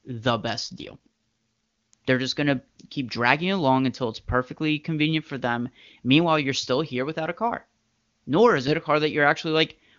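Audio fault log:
0.63–1.94 s, AMR rate drop: speech turns raspy and synthetic, which fits a fall to 6.6 kbit/s. The spectrogram keeps its full band with no gap, but the harmonics smear.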